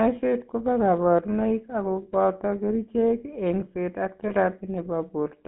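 A speech clip passed through the GSM full-rate codec from start to finish. Its damage is plainly audible. The codec models the vocal tract and excites it with a sparse, regular pulse train. That leaves the voice buzzy and gravelly. The audio is also band-limited to a phone line, from about 150 Hz to 3.6 kHz. Nothing bright survives above that. The coarse, rough texture fits the 13 kbps full-rate coder.

There are two bursts of lost GSM frames. The first runs from 2.02 to 2.07 s, between "kobo kaborunoik ako" and "booto kercheek eng'seet ak". The second runs from 4.28 to 4.32 s, right after "booto kercheek eng'seet ak". In each gap the decoder repeated the last good frame. This gives a brief metallic ring instead of a clean dropout. The first gap fits two missing 20 ms frames, and the second fits one.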